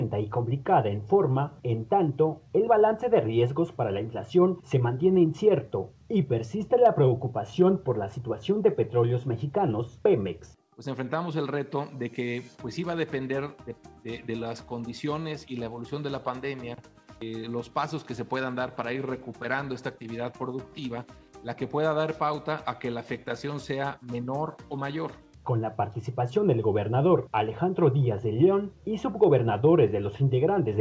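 No faults are audible; the audio has passed through a wideband call path and carries nothing above 8 kHz, which fits a codec such as G.722.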